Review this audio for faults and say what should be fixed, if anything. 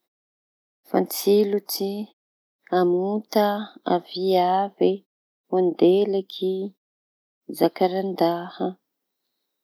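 Nothing needs fixing: the speech signal shows no technical faults, and the background drops to silence in the pauses and comes back in time for each following phrase, which is intended behaviour.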